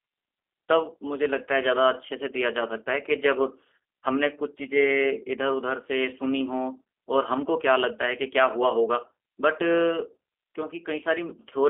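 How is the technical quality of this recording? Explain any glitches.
The recording has been carried over a low-rate VoIP link, audible throughout the speech as G.729 codec damage. The band is confined to roughly 300 Hz to 3.5 kHz, and the voice has a plainly rough, slightly synthetic edge. The codec rebuilds each short frame from a vocal-tract filter, a pitch predictor and a few coded pulses, which fits an 8 kbit/s stream. A simple telephone-band filter would only sound muffled. This adds buzzy texture and warbling on any background noise.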